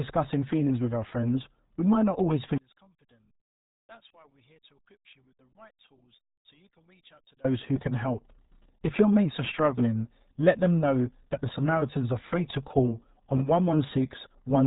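Speech, degraded throughout by the RealAudio 14.4 codec: heavy low-bitrate damage, consistent with roughly 8 kbit/s, leaves it muffled and gargly, with nothing above 3.8 kHz.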